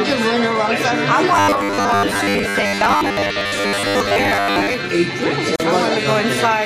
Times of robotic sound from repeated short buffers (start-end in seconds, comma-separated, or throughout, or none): 1.33-4.74